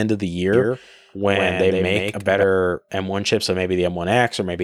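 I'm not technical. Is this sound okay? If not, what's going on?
No. The speech was likely recorded twice, creating a doubled audio track: from 0.53 to 2.43 s, just after "of the", a slightly quieter copy trails about a tenth of a second behind.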